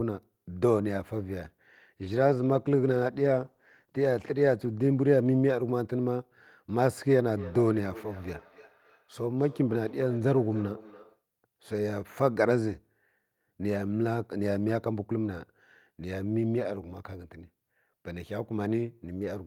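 Speech that turns rough and muffled from 2.01 to 6.43 s, worst for about 2.85 s. This is a call bitrate drop: the bandwidth estimate fell, and the encoder coded coarsely and cut the highs, which fits a fall from around 32 to 15 kbps. From 7.34 to 11.24 s each phrase returns roughly every third of a second, thinner and ringing, peaking about 18 dB below the voice. That is feedback echo between two devices: a second device in the room replays the call into a microphone whose echo canceller cannot remove it.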